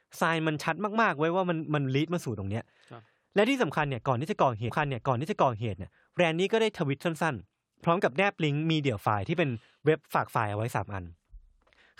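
It's a speech clip with a stream segment repeated: at 4.68 s it jumps back with a little blip, replaying about a second of audio through 5.68 s.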